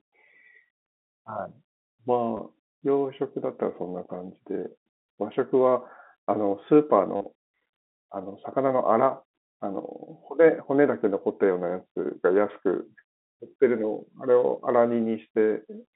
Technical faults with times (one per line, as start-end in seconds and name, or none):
2.37-2.39 packet loss with last packet repeated
7.16-7.26 packet loss with last packet repeated